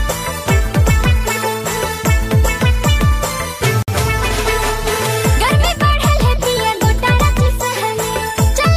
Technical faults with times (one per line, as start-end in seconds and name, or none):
3.82-3.88 gap at a join of encoded pieces